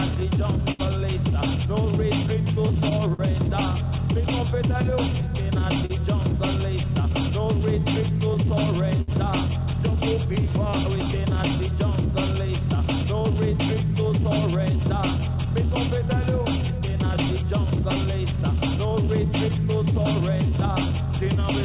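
The audio comes through a narrowband call path with nothing above 4 kHz, which fits G.711 A-law at 64 kbps, and it carries clock drift between sender and receiver: the sending end's clock runs slow by roughly 4%, so the receiver's jitter buffer keeps running short rather than filling up. To keep pace, the receiver makes repeated timing corrections from 0.34 s to 21.59 s, stretching short pieces so the audio plays at about 97% speed and picks up roughly 0.7 s of extra length overall, heard as a faintly dragging, slightly uneven tempo rather than any obvious jump. When a packet simply isn't there in time, you get a short stall from a late packet: at 0.72 s the last sound is held for 72 ms, and at 5.86 s for 41 ms, each a brief smear or buzzy hold with nothing actually lost. Twice the buffer empties again and again, giving repeated stalls (stutter): five gaps between 2.23 s and 3.21 s, longest 53 ms, and three gaps between 8.34 s and 9.10 s, longest 64 ms, with about a tenth of each stretch filled in, so the sound hitches and drags there.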